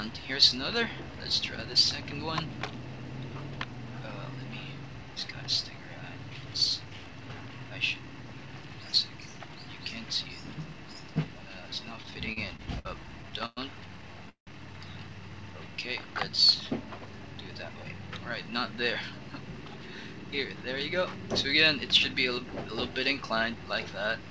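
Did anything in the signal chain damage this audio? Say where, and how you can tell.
Yes, in the network and jitter-buffer stage. Between 11.96 and 12.87 s there are repeated stalls (stutter): eight short gaps, the longest 59 ms. At 13.23 to 13.59 s there are four more, the longest 112 ms. Each gap is filled by extending the last sound and nothing is lost. That repeated stop-start pattern is what separates it from a single freeze.

At 14.29 to 14.49 s a call audio freeze holds the sound for about 176 ms. It fades to silence for about 110 ms, then resumes where it stopped, adding delay rather than dropping audio. One long hold points to a single late burst of packets, the likely cause being a jitter buffer that ran dry.

From 16.85 to 18.18 s the jitter buffer speeds up. Playback runs at 113% with pitch unchanged, trimming roughly a fifth of a second of buffered delay. It sounds hurried rather than chipmunk-like, which rules out a sample-rate mismatch. 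Throughout, nothing is present above 8 kHz, which fits the G.722 call codec.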